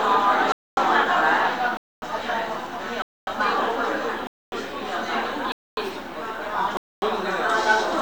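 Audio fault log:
0.52–0.77, 1.77–2.02, 3.02–3.27, 4.27–4.52, 5.52–5.77, 6.77–7.02 s: gap between chunks. Silence of 250 ms follows each 1 s chunk, so the sound breaks off into silent holes every 1.25 s.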